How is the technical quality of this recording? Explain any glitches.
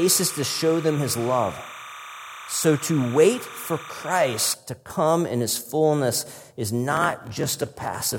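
The recording has two technical faults, one at the start and one at the end.

From 0.0 to 4.54 s, just before "to come in his", there is timecode bleed. Linear timecode at 30 frames per second leaks in from a nearby line. Its square wave flips between roughly 1 and 2 kHz. A chirping warble sits roughly 15 dB under the speech.

From 6.90 s to the end at 8.18 s, right after "in his fullness is", there is a block size mismatch (padded). One stage writes short blocks. The reading stage fills the shortfall with zeros, and its 43.1 Hz buzz fits a 1024-sample block. Speech drags about 6% slow, at nearly normal pitch.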